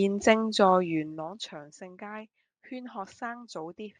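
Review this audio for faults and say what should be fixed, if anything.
Zipper noise, 0.89 to 1.36 s: a level drop of roughly 15 dB was applied in unsmoothed steps, about 70 per second, instead of as a continuous ramp. Each step leaves a small click, so a fine ticking rides on the speech as it fades. Interpolating the gain per sample, or ramping it across each buffer, would prevent this.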